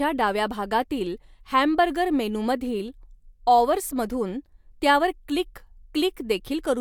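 Speech recording with no audible technical faults anywhere in the clip.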